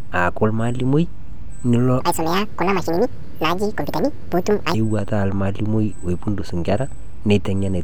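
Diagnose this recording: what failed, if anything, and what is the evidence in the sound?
A section at the wrong speed runs from 2.01 s to 4.74 s. The speech there is played 1.8 times too fast. It turns high and hurried, raised by roughly ten semitones, and normal pace and pitch return abruptly at 4.74 s. Speed and pitch shift together, so nothing is time-stretching the audio. The likely cause is an editing or playback stage reading that stretch of samples against the wrong clock, with a rate mismatch close to 1.8 to 1.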